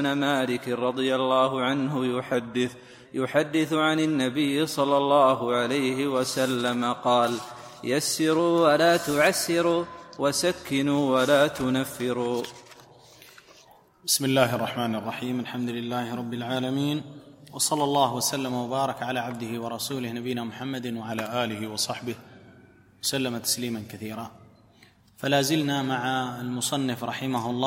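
Speed and pitch drop about 6% (−114 cents) at 2.34–3.06 s, 14.21–15.05 s and 21.12–22.11 s, and rise 6% (+107 cents) at 8.39–10.21 s, each snapping back. This is likely a drift correction step in clock-matching software.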